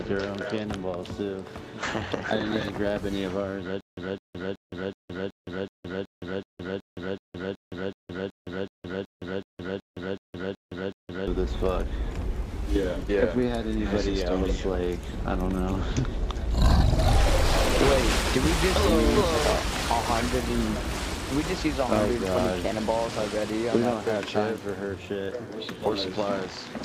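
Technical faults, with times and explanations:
3.81–11.27 s, stutter with silent gaps: the same fragment of about 208 ms plays again and again, 20 times, each followed by about 166 ms of dead digital silence, so a burst returns every 375 ms at a mechanical pace. This is likely a stalled player or stream replaying its last buffered fragment at each retry and then running dry. The audio that belonged to this span is lost. The waveform shows identical blocks separated by flat silent gaps. The spectrogram shows matching columns split by dark bands.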